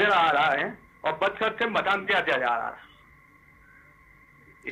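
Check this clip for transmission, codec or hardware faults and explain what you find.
Two related timing faults run through the clip.

Clock drift between sender and receiver is present throughout: the sender's clock runs about 2% slow, so the receiver's jitter buffer keeps draining. The receiver has to keep padding the stream, and the sound's pacing is never quite steady.

Repeated timing corrections occur from 0.73 s to 4.27 s. To cover the slow sender, the receiver repeats short pieces, stretching playback to 98% speed and adding roughly 70 ms in all. These are heard as faint, unevenly spaced hiccups and a slightly dragging tempo.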